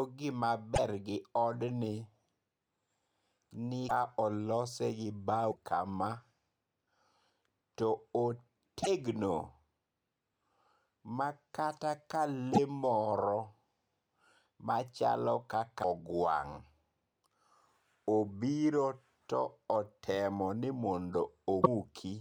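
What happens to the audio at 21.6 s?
From 21.62 to 21.67 s the speech breaks into a garbled glitch about two 26.1 ms frames long, and the speech jumps ahead. Unlike a clean dropout, the frames after the cut are likely decoded from another frame's bytes, a broken MP3 bit reservoir.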